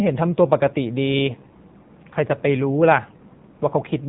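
Throughout, the speech sounds buzzy, thin and plainly synthetic, with nothing above 4 kHz. This is the AMR narrowband mobile codec: an 8 kHz vocal-tract model rebuilt from sparse pulses every 5 ms, and damage this audible fits roughly 7.4 kbps AMR-NB.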